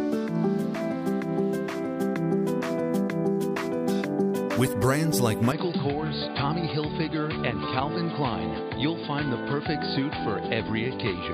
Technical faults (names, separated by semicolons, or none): input switched to a poorer device